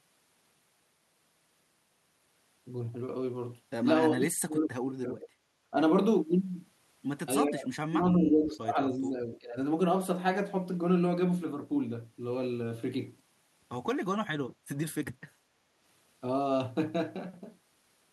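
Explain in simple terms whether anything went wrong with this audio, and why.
The speech drops away from 4.18 to 5.29 s, briefly from 5.71 to 5.75 s, and again from 7.47 to 9.58 s. This is speech suppressed in double talk: likely both sides spoke at once, and the echo canceller turned this talker down too.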